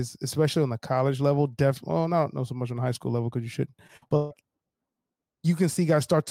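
Choppy, robotic speech from 3.87 to 4.33 s, just after "level because you shouldn't": repeated packet loss, with about half the stretch patched by extending earlier sound, the longest hole 140 ms.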